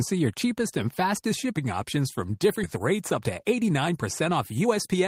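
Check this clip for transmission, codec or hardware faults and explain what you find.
Two transmission faults turn up, both in the second half of the speech.

At 2.63 to 2.65 s there's a skip ahead: about a second of audio got dropped, either lost in transit or thrown out when the jitter buffer overflowed while later audio was already queued. Playback just jumps forward with no gap, so the two sides butt together abruptly.

Right after, from 2.75 to 4.98 s, you get a jitter buffer speed-up. The buffer was holding more than its target, so the receiver kept trimming tiny pitch-period slices, around 0.4 s in total. The speech runs at roughly 117% speed with the pitch unchanged, and it sounds hurried.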